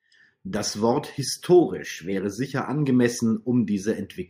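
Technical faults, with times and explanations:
1.62 to 2.13 s, drift correction step: for about half a second the speech abruptly runs faster and sits higher, roughly a semitone up (about 102 cents), with speed and pitch rising together by about 6 percent, then drops straight back to its original rate. The likely cause is clock-matching software making a single rate correction to refill or drain its buffer, so the tempo and pitch jump in one step instead of drifting gradually.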